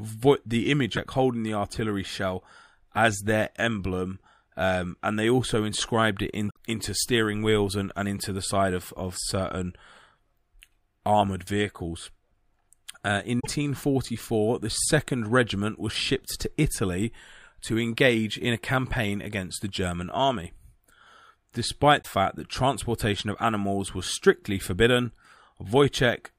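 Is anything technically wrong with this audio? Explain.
Yes. Damaged data in a compressed stream hits the speech at 0.93–0.99 s, 6.47–6.56 s, 13.39–13.47 s and 21.98–22.06 s. Corrupted bytes make the decoder misread frames and lose sync until it finds the next frame header. Each 56–96 ms stretch breaks up, and the waveform and spectrogram show a short, abrupt discontinuity there.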